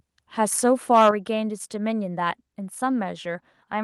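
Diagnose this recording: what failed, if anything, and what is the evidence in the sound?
Input gain set too high at the converter stage likely caused the microphone overload from 0.94 to 1.09 s. The speech peaks drive about 4 dB past full scale, flattening roughly a tenth of the waveform's tops and giving the loudest syllables a harsh, crackling edge.

Call processing then likely stepped the microphone volume down at 1.11 s, cutting the device input by 6 dB in a single move. Right after the distorted peak, speech and background both drop abruptly in level.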